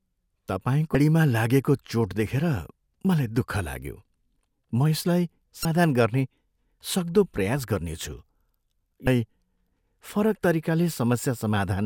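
Speech with damaged data in a compressed stream at 0.92–0.95 s, 5.62–5.65 s and 9.04–9.07 s. Each is a brief glitch of about 30 ms, where corrupted bytes made the decoder misread frames and resynchronise at the next valid header.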